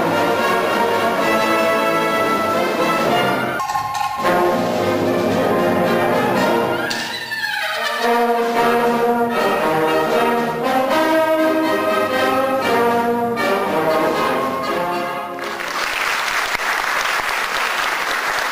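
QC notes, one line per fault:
Nothing to flag here, as no technical faults turn up anywhere in the clip.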